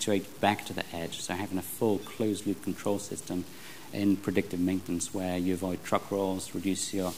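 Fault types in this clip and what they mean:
low bit depth without dither: Grainy distortion follows the sound throughout, only around 20 dB below it, roughening the quieter parts and making the faintest ones sputter or vanish. It is likely truncation to very few bits without dither, which fits about 7 bits.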